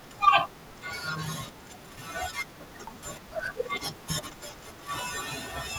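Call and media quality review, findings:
CD skip at 2.87 s: brief tick, mute of a couple of milliseconds, then speech resumes from a different point, jumping forward or back by whole disc turns. Probable component: CD transport. Mechanism: laser jumped, from a knock or disc flaw, onto another turn of the spiral.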